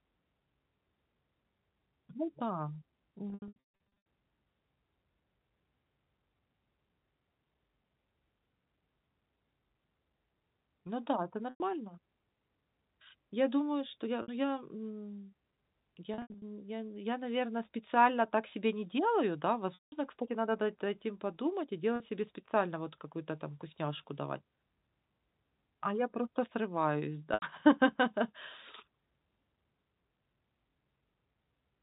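Packet loss with pitch repetition: the receiver bridged dropped packets by repeating the last pitch period. This gives a buzzy, held tone or a brief dropout at 3.3–3.56 s (scattered), 11.5–11.6, 14.22–14.28 after "думаю что я", 16.14–16.42, 19.74–19.92, 21.96–22.0 and 27.34–27.42 s, over 4 kHz-limited G.711 telephone coding.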